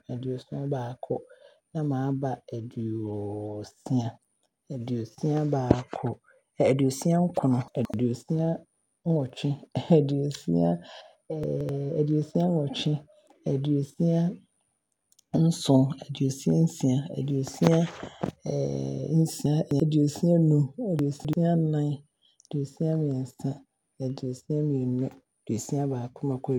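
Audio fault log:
7.68–7.94 s, 11.44–11.69 s, 19.46–19.80 s, 20.99–21.33 s, chunks out of order: an 85 ms chunk of speech lands two or three chunks late, so you get a brief jumbled stretch with three hard joins.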